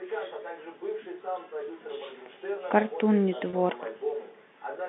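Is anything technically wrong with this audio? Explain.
Yes. At 3.50 to 3.53 s there is packet loss with pitch repetition. About 30 ms of the speech stream never arrived, which fits three 10 ms packets, and the receiver filled the hole by looping the last pitch period it had decoded. Because the gap is short, it comes across as a brief held, buzzy sustain instead of a dropout. The band-limited G.711 telephone coding around it shows no added damage.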